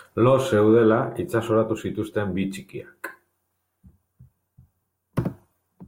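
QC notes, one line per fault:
No faults were heard in this speech recording.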